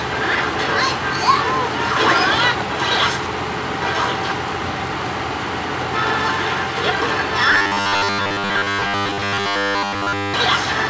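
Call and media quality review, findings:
Robotic sound from repeated short buffers, 7.53 to 10.34 s. Metallic buzz at 100 Hz. Buzz rate fits a 10 ms segment looped. Around 70% of audio repeated. Likely cause: jitter buffer starved, last chunk replayed to fill gaps. Audio passes through the WebRTC call path on G.722 at 64 kbps. Nothing above 8 kHz, which is consistent with that codec's band limit.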